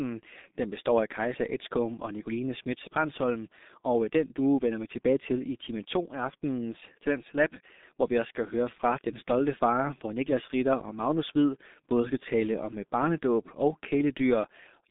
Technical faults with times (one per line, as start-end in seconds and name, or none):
0.00-14.90 G.723.1 codec